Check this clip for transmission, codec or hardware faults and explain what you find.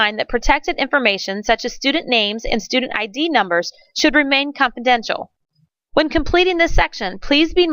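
No transmission, codec or hardware faults are audible anywhere in the clip.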